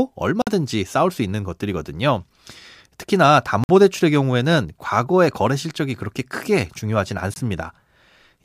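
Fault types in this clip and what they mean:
Block of digital silence: the speech drops abruptly to silence for about 51 ms at 0.42 s, 53 ms at 3.64 s and 21 ms at 7.34 s (the last fitting a 1024-sample buffer). On a waveform these appear as flat gaps, and on a spectrogram as blank vertical bands edged by thin broadband lines.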